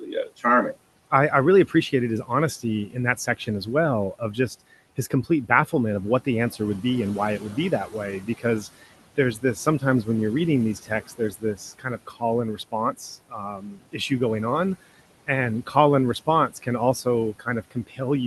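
Noise suppressor artifacts run throughout. Steady room noise is pulled down by about 18 dB, so pauses look almost blank on a spectrogram while the residue rises again beneath the speech.

Speech cut by the noise suppressor occurs at 0.0–1.12 s (before "I I really"), 1.67–4.38 s, 4.97–6.84 s, 7.39–10.08 s (between "be and why it" and "when you're reading"), 10.75–14.11 s and 15.27–18.0 s (after "going on"). In each stretch, soft consonants and word endings are mistaken for noise and dropped by about 12 to 19 dB. The 10.75–14.11 s stretch is worst, with over a second affected. These parts sound swallowed, and the waveform shows syllable tails squashed into the floor.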